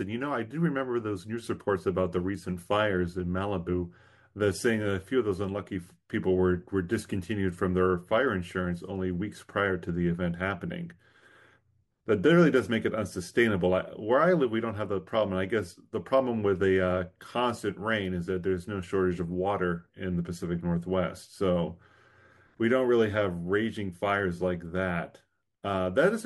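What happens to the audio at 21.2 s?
Nothing goes wrong at 21.2 s; the speech there plays through intact, with no dropout, click, distortion or other fault.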